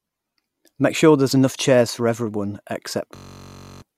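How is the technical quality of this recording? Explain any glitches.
The recording has one serious glitch. A system hang loop runs from 3.16 to 3.82 s, right after "enough chairs for everyone". The system froze while the sound hardware kept replaying one 21.33 ms slice of its buffer, which fits a 1024-sample buffer. That slice repeats 31 times, giving a steady buzz at about 47 Hz. Roughly 0.7 s of audio is lost. The waveform shows an identical short pattern tiled across that stretch, and the spectrogram shows evenly spaced horizontal harmonic lines at multiples of 47 Hz.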